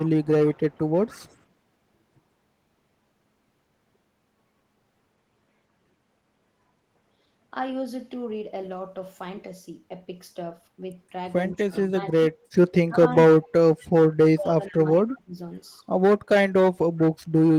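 A speech recording with two kinds of fault. An echo leak is heard from 0.0 to 1.35 s, then briefly at 13.79 to 13.87 s and again from 14.47 to 15.01 s. A faint delayed copy of the speech trails the original by 172 ms. It sits well below the main signal, roughly 25 to 35 dB down. The likely cause is a far-end loudspeaker whose echo canceller let part of the microphone pickup through and sent it back. The second fault is speech suppressed in double talk, at 11.55 to 11.94 s, 12.87 to 13.0 s, 13.36 to 13.9 s and 14.36 to 15.37 s. In each stretch the speech dips sharply, by around 25 dB and by about 35 dB at 13.36 s, then recovers. This likely comes from an echo canceller that could not tell the talker from returning echo when both sides spoke, so it turned both down.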